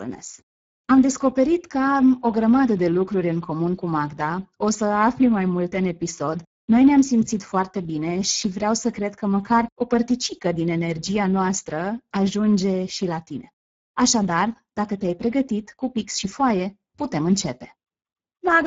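From start to finish the speech carries plainly audible Speex codec damage. At around 9.8 kbps this CELP coder has few bits for the excitation, so voices come out hoarse and noisy. Nothing remains above about 7.7 kHz, and the top band is a shaped, noise-like fill.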